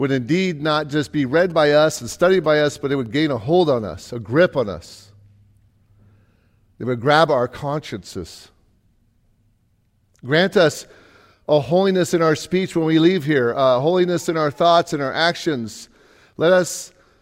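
GSM signalling bursts run from 1.5 to 3.07 s, after "not just be read" and ending before "gain a hold on". A nearby 2G phone's radio bursts are rectified by the audio circuit, giving a galloping dit-dit-dit of short 217 Hz buzzes, well below the speech.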